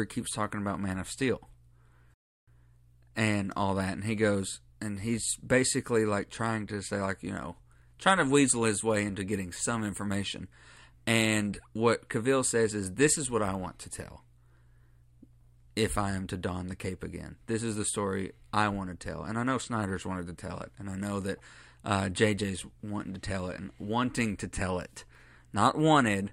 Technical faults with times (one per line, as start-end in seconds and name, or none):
2.14-2.48 rebuffering stall